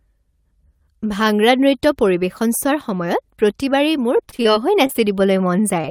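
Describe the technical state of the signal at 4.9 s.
Short concealed packet loss occurs at 4.87 to 4.91 s and again at 4.93 to 4.96 s. Each time about 20 ms of audio arrived too late, and the receiver bridged the gap by extending the preceding sound before blending back, leaving two quick smeared, wobbly blips.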